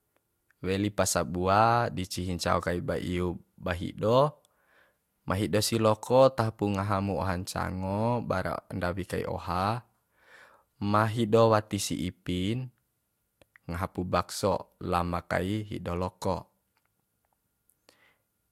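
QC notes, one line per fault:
Nothing to flag here, the speech comes through without any audible problems.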